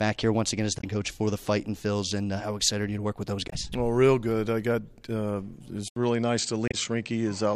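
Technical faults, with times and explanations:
0.77–0.84 s, 3.46–3.53 s and 6.68–6.75 s: damaged data in a compressed stream. Each event is a brief glitch lasting about 70 ms. Corrupted bytes in the encoded stream left the decoder unable to read those frames. It lost sync and skipped ahead to the next valid frame header, so the audio briefly breaks up.
5.88 s to the end: input switched to a poorer device. A gap of about 80 ms is followed by a duller, narrower sound with nothing above 8.4 kHz. A new background noise floor sits about 50 dB below the signal, while the loudness stays roughly the same. This is likely a change of input mid-recording to a lower-bandwidth microphone or headset profile, which imposes its own band limit and noise character.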